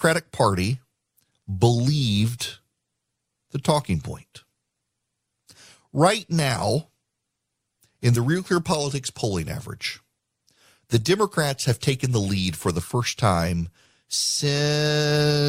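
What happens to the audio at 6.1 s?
Nothing goes wrong at 6.1 s; the speech runs through that moment intact, with no dropout, click, distortion or other fault.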